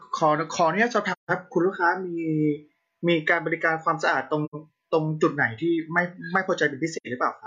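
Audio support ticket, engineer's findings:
AAC frame loss with muting: soft dropouts at 1.11–1.31 s (around 170 ms, fits four lost frames), 4.45–4.55 s and 6.96–7.07 s (around 85 ms each). Decoder zeroes the missing spectrum, and window overlap fades out and back in.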